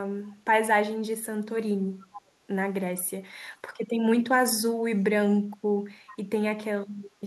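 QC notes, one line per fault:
2.15–2.22 s and 6.07–6.17 s, echo leak: a faint, short scrap of the speech comes back about 435 ms after the original, roughly 20 dB below it the first time and about 25 dB below the second. The likely cause is a far-end loudspeaker whose echo canceller let part of the returned signal through. Room reverberation would instead trail off smoothly right behind each sound, not return as a separate late copy.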